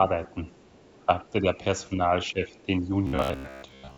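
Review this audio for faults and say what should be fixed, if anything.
Speech suppressed in double talk occurs at 0.33–0.39 s, 0.73–0.78 s, 1.06–1.59 s, 1.89–1.99 s and 2.32–2.91 s. The speech dips briefly, by about 10 dB, or about 5 dB in the 1.06–1.59 s stretch. This is likely an echo canceller that could not separate the talker's own speech from the overlapping loudspeaker echo and turned both down. On the waveform these show as short notches in the envelope, and on a spectrogram as faint vertical gaps. Tuning the double-talk detector to hold suppression back while both sides speak would prevent this.

The other side's voice leaking through appears from 0.52 to 0.98 s. It is a faint second voice about 35 dB below the main speech, likely loudspeaker output that the echo canceller failed to fully remove. On a spectrogram it shows as weak harmonic traces underneath the main speech. Better echo-path modelling or stronger residual-echo suppression would prevent this.

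Robotic sound from repeated short buffers runs from 3.07 s to the end. Most of this span is a rigid, metallic buzz at 66.7 Hz, which fits a roughly 15 ms block being looped. This is likely because audio arrived too late and the software repeated the last buffer. On the waveform it appears as identical repeating segments, and on a spectrogram as evenly spaced horizontal lines. A larger jitter buffer or proper packet-loss concealment would prevent this.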